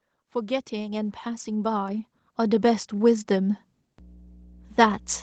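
A ground loop or a nearby transformer starts leaking the 60 Hz power line into this speech recording at 3.98 s, and the mains hum lasts until the clip ends at 5.23 s. It sounds like a steady low drone with a few low harmonics, sitting roughly 15 dB below the speech. The speech above is band-limited to about 8 kHz by its call path, which sounds like a typical Opus call.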